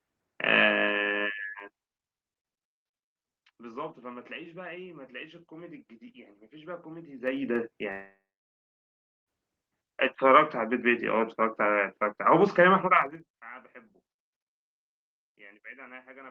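Zipper noise at 1.56–2.0 s, 7.04–7.56 s and 12.95–13.31 s: the level moves in unsmoothed 3 dB steps, so each jump clicks. The first drops about 15 dB at roughly fifteen steps a second, the second rises about 15 dB at around ten a second, and the third falls about 25 dB at roughly twenty a second. Each is heard as a quick ticking over the speech.

At 7.91 s comes a long network dropout, likely from audio that never arrived. The speech is carried on as a fading buzz, then about 1.1 s of silence. It resumes at 9.29 s with roughly 1.4 s of speech lost.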